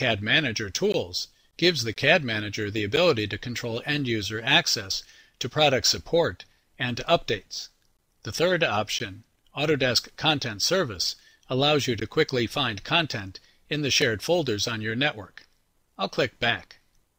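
Short hard-edged dropouts of silence at 0.92, 1.94, 2.96, 7.97, 8.99, 12.0 and 14.02 s mark a gap between stream segments: mismatched time stamps at 1-second segment boundaries leave silence-filled holes.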